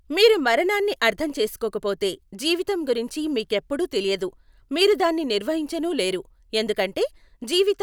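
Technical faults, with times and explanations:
No technical faults detected.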